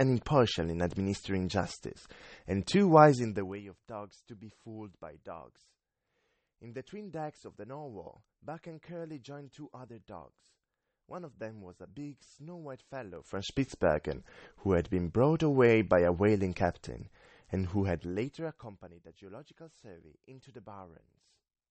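Right from the start the speech sounds watery and swirly, with smeared consonants and nothing above 8.4 kHz. That's MP3 compression, likely at a starved bitrate around 32 kbps, where the encoder chops the treble and lets weak frequency lines flicker frame to frame.

From 3.12 to 3.64 s there's zipper noise: the level drops by roughly 20 dB in 1 dB steps, about 30 a second, each one ticking audibly. It happens again from 13.12 to 13.52 s, rising about 20 dB in coarser 2 dB steps.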